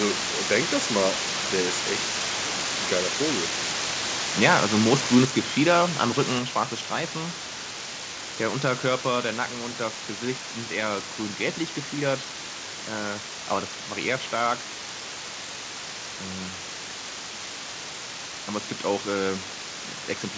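From the first moment to the end, a constant, even hiss sits under the speech, roughly as loud as the speech itself, with no distortion. This is low bit depth with dither: the level is consistent with only 4 bits, and added dither turns the rounding error into steady white noise.

At 5.25 s, and again at 6.39 s, the speech and the background both drop abruptly, each time by about 4 dB. The likely cause is the microphone volume stepped down, with the call software lowering the input gain in one step because it judged the level too high.

The G.722 call path cuts everything above 8 kHz.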